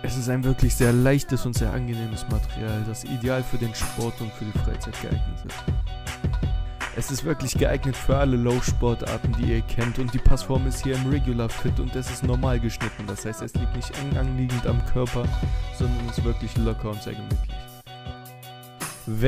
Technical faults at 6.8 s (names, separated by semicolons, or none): none